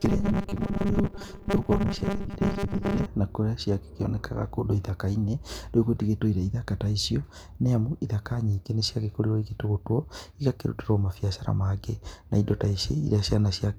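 A speech clip opens with robotic sound from repeated short buffers from 0.01 to 3.06 s, ending just before "na kũrĩa ciakĩonekaga kũndũ". A rigid metallic buzz at 200 Hz runs through it, likely because a 5 ms chunk is replayed for roughly half the audio. Spectrograms show evenly spaced horizontal harmonics, and waveforms show identical repeating cycles.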